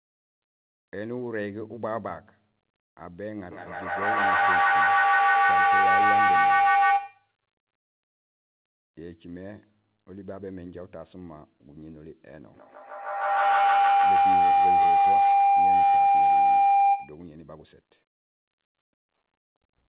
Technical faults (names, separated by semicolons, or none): feedback howl